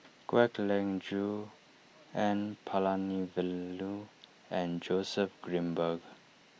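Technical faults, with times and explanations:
No technical faults detected.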